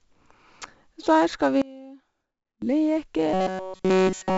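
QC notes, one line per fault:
Throughout: 4-bit ADPCM compression. There's a gritty hiss riding on every loud stretch and some crunch on the sharp onsets, where the coarse 4-bit steps can't keep up. Nothing comes through above about 7.7 kHz, which fits a 16 kHz sample rate at 64 kbps, so the whole thing sounds dull too.
1.62–2.62 s: one channel inverted. The level drops by about 24 dB for a second, leaving only a faint copy. That's most likely one side flipped in polarity, so the centred material cancels in the mono sum and only the small difference between channels survives.
3.34–4.38 s: robotic sound from repeated short buffers. From here to the end it becomes a rigid metallic buzz at 188 Hz that still roughly tracks the sound's shape. It likely comes from a tiny chunk of about 5.3 ms being looped over and over, with essentially all of that stretch repeated instead of fresh audio.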